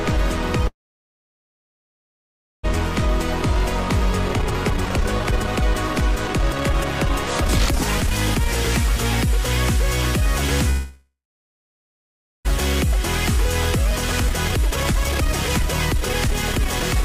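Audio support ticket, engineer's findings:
Call audio freeze, 0.67–2.65 s: sound stalls for about 1.96 s. Last bit carries on briefly, then silence for about 1.9 s. Picks up where it left off, nothing lost, just a gap added. Likely late packets draining the jitter buffer.

Call audio freeze, 10.70–12.47 s: same again, about 1.75 s. Tail of the last sound runs on and fades over roughly half a second, then about 1.26 s of silence. Resumes intact, delay added.

Jitter buffer speed-up, 3.56–10.22 s: audio noticeably hurried at about 126% speed, pitch unchanged. Receiver trimming short pitch-period chunks over and over to shed the backlog. Around 2 s cut in total.

Jitter buffer speed-up, 12.84–17.04 s: same rushing at about 127%, pitch steady, runs to the end of the clip. Same trimming after the second freeze, around 1 s removed.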